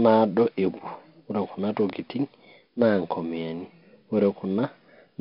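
Speech runs through 4-bit ADPCM compression from start to finish, and the damage is heavy. Each sample is coded as a coarse step from a prediction, so a gritty hiss rides on every loud syllable and rises and falls with the level. Sharp onsets smear where the step size lags. Nothing above about 5.3 kHz survives, which fits a data rate near 44 kbps. Unlike MP3-style artefacts, there is no swirling or warbling, only level-tracking grit.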